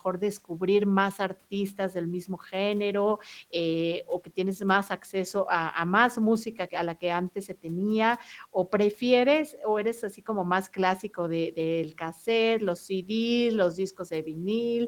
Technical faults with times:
none

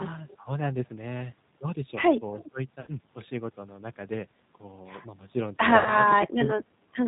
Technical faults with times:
0.00-7.08 G.729 codec
2.81-2.89 VoIP packet loss concealed by the speech codec
5.77-5.97 VoIP packet loss concealed by the speech codec

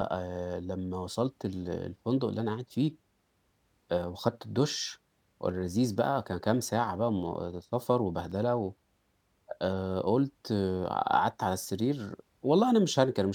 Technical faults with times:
8.32 block of digital silence

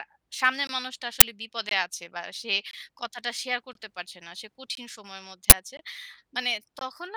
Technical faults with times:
0.67 gap between chunks
1.20 uninitialised buffer
1.69-1.71 gap between chunks
2.71-2.73 gap between chunks
3.73 gap between chunks
4.75-4.77 gap between chunks
5.50-5.52 uninitialised buffer
5.77 gap between chunks
6.79-6.81 gap between chunks

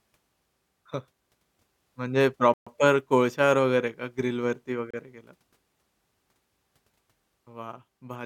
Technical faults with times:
2.54-2.67 Bluetooth stall
4.91-4.94 Bluetooth stall

